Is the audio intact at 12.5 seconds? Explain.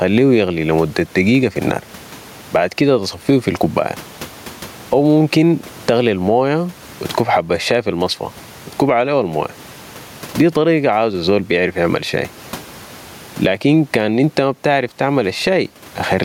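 No. Gain pumping runs through the whole clip, including 12.5 s: the input gain is set far too high, and a fast limiter likely clamps it on every loud syllable, swinging the level by around 20 dB. The room noise sits about 38 dB below the speech, and the speech is left squashed and flat in dynamics.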